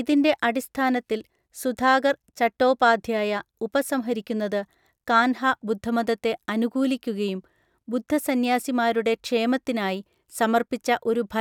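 No technical faults can be heard anywhere in the speech.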